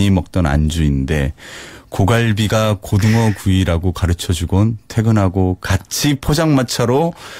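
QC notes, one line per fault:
No technical faults were heard in the speech signal.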